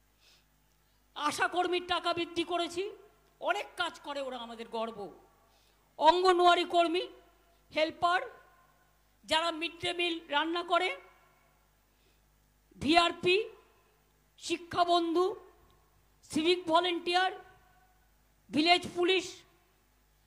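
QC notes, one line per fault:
No fault to note.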